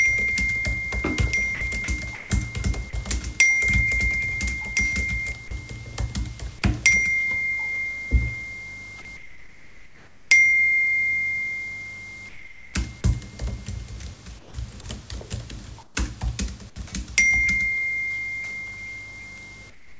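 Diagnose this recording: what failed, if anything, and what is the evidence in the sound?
Doubled audio track, from 0 to 5.32 s. A clean, full-band copy trails roughly 1.5 s behind, about 10 dB down. This is likely a second capture path or a misaligned edit.

Sound chopped by the voice detector, 1.55 to 1.88 s. About 90 ms of sound gives way to synthetic fill. This is likely call-processing gating.

Sound dropped by the voice detector, at 2.15 to 2.30 s and 14.81 to 14.84 s. The sound is cut and replaced by steady noise. The sender's detector likely mistook it for background.

Comfort noise in place of the background, at 9.17 to 10.31, 12.29 to 12.74, 14.39 to 14.54, 15.83 to 15.95 and 19.70 s to the end. Featureless noise sits about 4 to 10 dB lower. This is likely discontinuous transmission.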